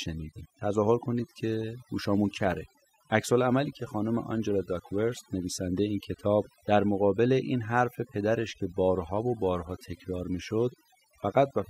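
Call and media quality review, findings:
Overdone noise removal, throughout: suppressor set too aggressive, gating bands near its noise estimate; background drops and breaks into twinkling specks, quiet speech detail lost.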